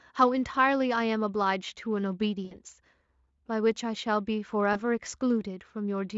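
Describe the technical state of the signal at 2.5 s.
VoIP packet loss concealed by the speech codec runs from 2.45 to 2.59 s. About 60 ms of audio is missing. The decoder stretches its last pitch and filter into a buzzy tone or coloured noise that fades.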